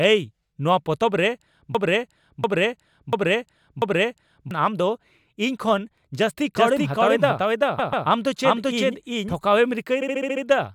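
From 1.75 s to 4.51 s the speech turns into a broken-record loop. A 0.69 s fragment plays back to back four times with identical content. The likely cause is a player or stream stall that kept resending the last buffered piece, so the speech belonging to that stretch is lost.

From 6.56 s to 9.34 s a doubled audio track appears. A second full-band copy runs roughly 0.4 s behind at about the same level, with no decay or room colour, and starts and stops abruptly. This is likely a second capture path or a misaligned edit layer.

Repeated frames cause two stutters. At 7.78–8.06 s a 139.3 ms block plays two extra times, adding 278.6 ms, which fits a run of six frames. At 10.01–10.43 s a 69.7 ms block plays six extra times, adding 418 ms, which fits three frames.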